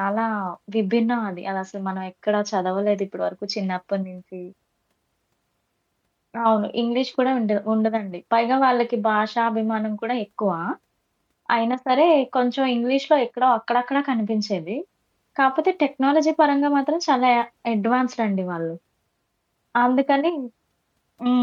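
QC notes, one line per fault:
No fault found in the speech clip.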